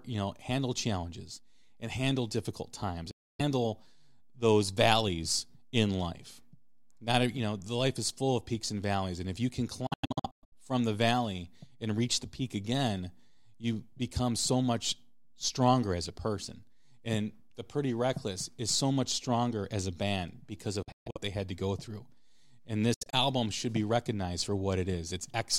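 The speech cuts out four times, with sharp edges. Each time it resumes further along, as if it had kept playing. The first gap runs 3.11 to 3.41 s, after "and handle difficult times". Next, 9.87 to 10.53 s breaks into several short holes after "and if you can". Similar broken gaps follow at 20.83 to 21.18 s and 22.94 to 23.15 s, before "should be recognized for". This is likely a Bluetooth dropout, where late packets were discarded.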